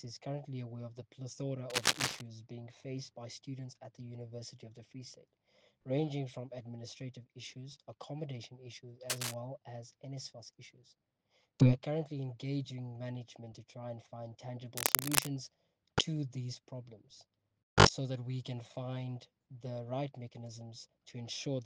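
Cable scratch noise at 1.70 to 2.23 s, 9.10 to 9.34 s and 14.77 to 15.28 s: rough, uneven bursts of scratching, about as loud as or louder than the sound, likely from a worn, moving contact.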